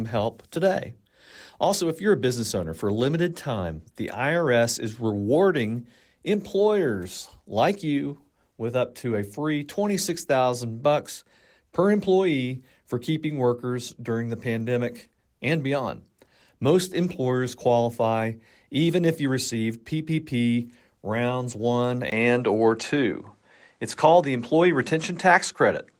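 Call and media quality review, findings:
Speech turns duller from 22.1 s to the end. The waveform shows a 20 ms gap at the transition and a level step of about 5 dB. On the spectrogram, energy cuts off at 10.4 kHz, over a faint new noise floor roughly 50 dB down. Likely cause: input switched to a poorer device.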